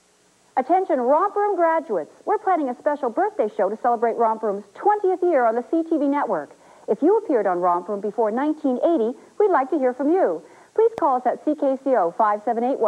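At 10.98 to 11.00 s there's a single loud pop, well above the sound, likely a voltage spike from a plug or switch, riding over the audio underneath.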